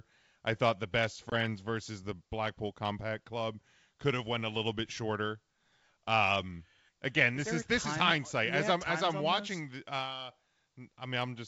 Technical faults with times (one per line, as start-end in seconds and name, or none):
1.30-1.34 packet loss on an ADPCM call